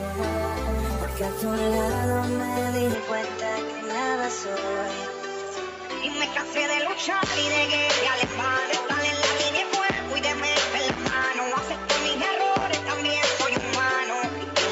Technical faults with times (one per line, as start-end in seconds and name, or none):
2.94-14.72 input switched to a poorer device